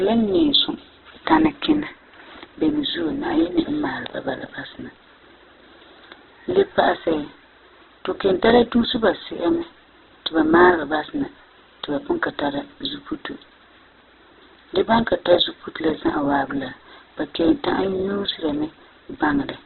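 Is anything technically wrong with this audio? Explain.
Yes. Throughout the speech, a very low bitrate, likely Opus compression in its CELT mode at roughly 8 kbps, starves the encoder. It narrows the band to nothing above 4.1 kHz and fills bands with folded or noise content, so the sound is dull, rough and grainy.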